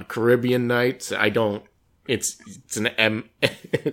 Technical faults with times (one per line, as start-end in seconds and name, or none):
none